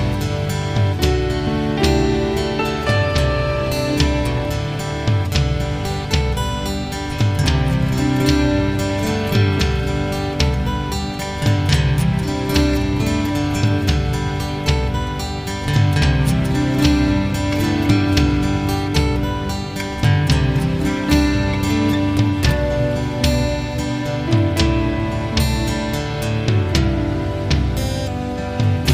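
Listening through the audio, nothing stood out as a technical problem at any point.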